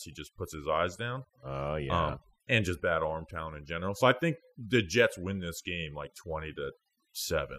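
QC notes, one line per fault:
Throughout: overdone noise removal. Noise reduction applied too aggressively pulls individual frequency bands far down or out whenever they sit near the noise estimate, so gaps between phrases drop to near silence with twinkling specks, and quieter speech components vanish.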